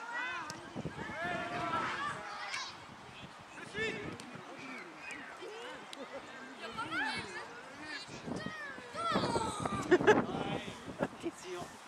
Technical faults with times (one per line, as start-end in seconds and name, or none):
none